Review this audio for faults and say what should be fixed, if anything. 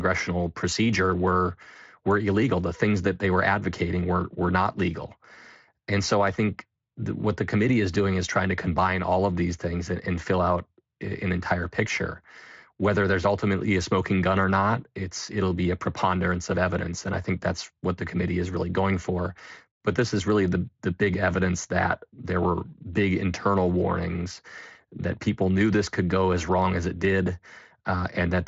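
Nothing needs fixing: the speech carries only the light coloring of a Speex path, with content stopping near 7.6 kHz, which fits a setting around 24 kbps.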